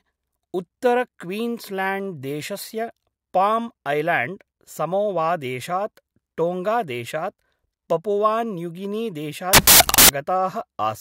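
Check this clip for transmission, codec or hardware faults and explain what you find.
One fault, a short burst of samples built from the wrong bytes, from 9.53 to 10.09 s, lasting about 0.56 s. For that stretch the reader assembled each speech sample from misaligned or swapped bytes, so the rapidly varying low-order bits landed in the high-order positions and dominated every value. The result is a blast of loud, harsh broadband noise replacing the speech.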